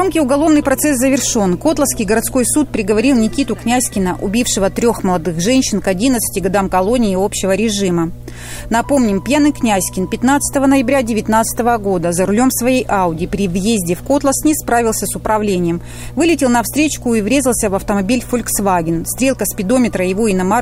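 From the first moment to the very end there's mains hum sitting under everything, a steady low drone at 60 Hz, with a few low harmonics stacked on top. It's fairly prominent, somewhere around 15 dB below the programme, so you notice it even when the sound is busy. Something let the power line leak into the signal path, probably a ground loop between pieces of gear or a transformer sitting too close to a cable or input.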